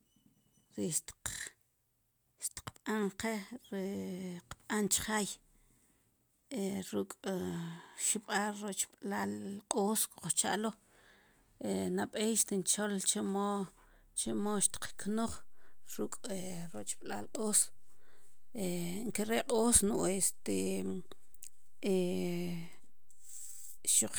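At 14.26 s a DC step shifts the waveform's zero line and holds to the end, producing a single low thump while the speech continues unchanged.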